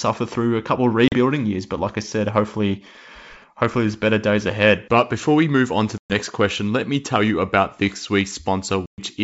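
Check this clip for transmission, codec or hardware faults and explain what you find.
Two faults are audible in this speech: packet loss on an ADPCM call, heard three times, and GSM signalling bursts. The wideband G.722 coding can be heard carrying the speech up to around 7 kHz.

Packet loss on an ADPCM call occurs at 1.08 to 1.15 s just after "through a couple of", at 5.98 to 6.12 s between "we move on to" and "question let me tell", and at 8.86 to 9.01 s. Each is a hard-edged silent hole, 40 ms at first and then 120 ms, and the speech returns with brief distortion. The missing packets desynchronise the decoder's predictor and step size from the sender's.

GSM signalling bursts run from 1.30 to 3.44 s, starting shortly after "through a couple of". They are a galloping dit-dit-dit of short 217 Hz buzzes, about 30 dB below the speech. A nearby 2G phone is signalling, and the audio circuitry rectifies its radio bursts.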